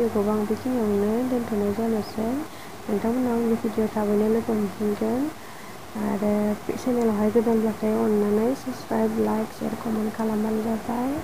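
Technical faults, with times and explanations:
Throughout, low bit depth without dither: grainy distortion rides on the sound and changes with it, only around 25 dB down, and quiet moments turn gritty. Likely the audio was truncated to 6 bits without dither, so the error follows the waveform.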